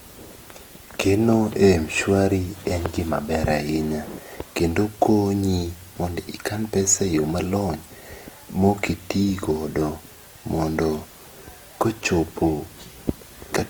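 From start to finish the speech has that grainy, roughened texture you get from Opus compression at a low rate, likely around 24 kbps in its music mode. Bands get filled with noise when bits run short, so tonal parts sound rough rather than swirly, while the bandwidth stays wide, up to about 20.1 kHz.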